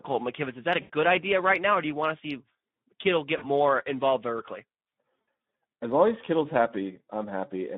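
The whole clip carries the Speex codec. This is speech squeezed through a CELP coder at a setting that sounds like roughly 11 kbps. There aren't enough bits for the excitation, so the voice comes out noticeably hoarse and grainy. The line band runs about 150 Hz to 3.6 kHz, which gives it a narrow, phone-like top end. The codec damage is plainly audible throughout.

On top of that there are three dropouts, each covered by VoIP packet loss concealment in the speech codec. The first, from 0.81 to 0.90 s, is the longest at about 80 ms, which fits around four lost 20 ms frames. The second runs from 3.37 to 3.48 s and fits about 40 ms of lost audio. The third, from 5.21 to 5.27 s, fits about 60 ms. In each gap the decoder keeps extending the last pitch and filter while turning the gain down, so you get a smeared, buzzy tone or coloured noise that fades out. The voice stays weak or distorted for tens of milliseconds or more after real packets arrive again.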